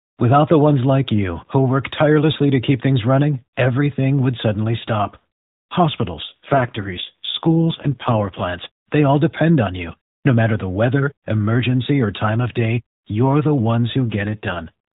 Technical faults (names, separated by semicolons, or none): AMR rate drop